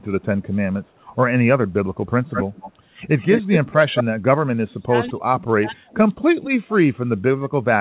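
First up is echo leak. At 0.84 to 1.15 s there's a very faint delayed copy, about 40 dB down, lagging roughly 280 ms. Then at 2.31 to 2.72 s and 3.19 to 3.73 s it comes back much stronger, only about 5 dB under the speech, at about a 196 ms lag. Short bursts follow at 3.96 to 4.04 s and, fainter at about 30 dB down, at 5.07 to 5.11 s. The likely cause is a loudspeaker on one side whose echo canceller let its mic pickup slip back into the call.

Then there's speech suppressed in double talk. From 3.72 to 4.93 s, for about a second in total, and again from 5.09 s to the end, the talker's level sags, dropping as deep as about 35 dB. It likely happens because the canceller can't tell the near talker from the echo and ducks both. All of this sits within a band that stops at 4 kHz, which fits a G.711 call path.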